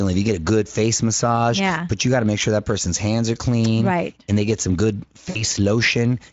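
At 5.29 s the speech smears into a short, stretched, fading sound, and it stays weak and distorted until about 5.44 s. This is VoIP packet loss concealed by the speech codec. About 60 ms of audio went missing, which fits roughly three 20 ms frames. The Speex decoder filled the gap by repeating its last pitch and filter at falling gain, and because each frame builds on the one before, it took a while to recover.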